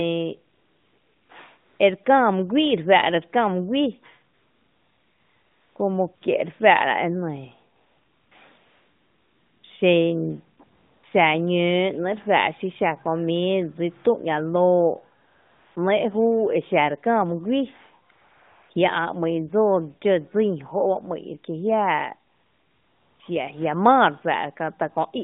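Speech passed through the AMR narrowband mobile codec, heard as a 150 Hz to 3.7 kHz band with mild coding damage, shows AMR comfort noise in 13 pauses between 0.54 s and 23.2 s. The gaps run from 20 ms to 1.42 s, the longest between "mý guíi" and "como que re faa’ra" at 4.34 s. The real background is swapped for smooth synthetic hiss. On a spectrogram these pauses appear as flat, featureless noise blocks with hard edges. The waveform shows a steady low-level floor that switches abruptly against the surrounding audio.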